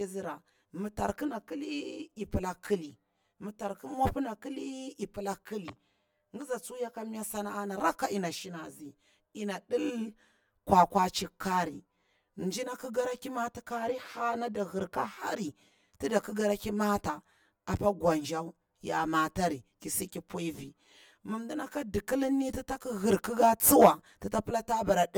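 Throughout, the speech sounds hollow and phasey, with fixed notches starting around 50 Hz and repeating roughly every 100 Hz. This is channel delay (comb filtering): one channel lags the other by about 10 ms, so summing them to mono cancels those frequencies.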